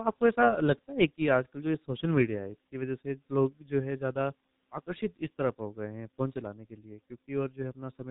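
Throughout, the speech passes through a G.723.1 codec at what sounds like about 6 kbit/s, cutting everything above 3.8 kHz and leaving it heavily muffled, hoarse and smeared at consonants.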